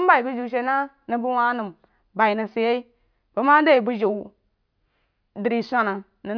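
No technical faults can be heard at any point in this speech recording.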